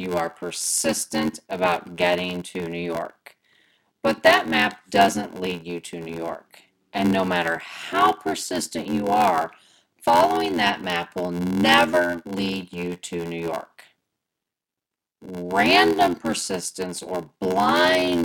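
Throughout, a block size mismatch pads each 512-sample block with silence. A steady 86.1 Hz buzz results. Speech runs at 0.861 speed, timbre roughly unchanged.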